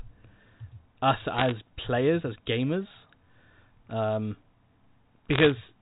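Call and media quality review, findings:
Bit errors on digital phone line, 1.34–1.52 s (just before "players as gamers") and 5.33–5.52 s: sharp tick crackle over intact speech, flipped bits corrupting individual G.711 mu-law samples at under one percent.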